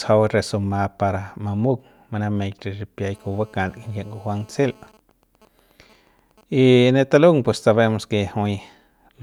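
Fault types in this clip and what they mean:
GSM phone buzz: a nearby 2G phone's 217 Hz call bursts are rectified in the audio circuit, adding a steady raspy buzz about 32 dB under the speech.
GSM signalling bursts: with its user silent, the phone sends only short burst groups, rectified into a faint run of even ticks with a longer 217 Hz buzz twice a second.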